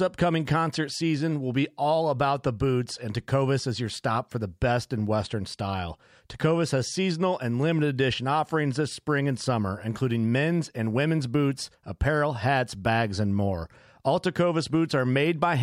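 Nothing goes wrong anywhere in this stretch of speech, so there's no fault to point to.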